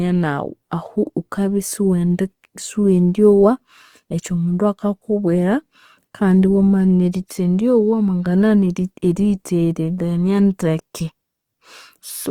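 Throughout the speech, the sound is rough and grainy, with tones turned noisy, yet the band stays full, extending to about 20.2 kHz. This points to likely Opus compression in its CELT music mode, starved of bits at a rate that fits roughly 24 kbps.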